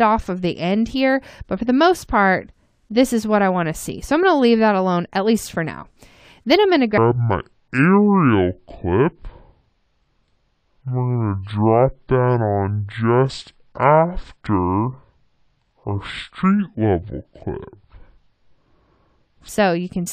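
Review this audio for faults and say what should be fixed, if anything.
From 6.98 s to 19.49 s there is a section at the wrong speed: the audio plays at 0.561 times its original rate, so it sounds slowed and sits roughly ten semitones lower. This is likely a clock or sample-rate mismatch during editing or playback. On a spectrogram, harmonics and energy bands drop abruptly at 6.98 s and stretch out in time. In the waveform, cycles and envelopes become longer and more widely spaced.

To prevent it, check that every segment is resampled to, and played back at, the project's true sample rate.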